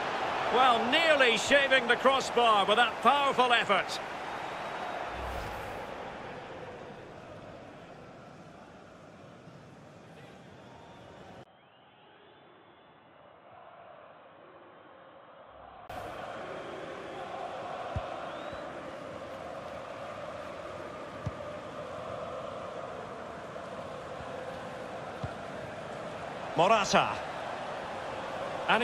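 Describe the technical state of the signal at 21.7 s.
At 21.7 s the signal is intact, with no audible fault at that moment.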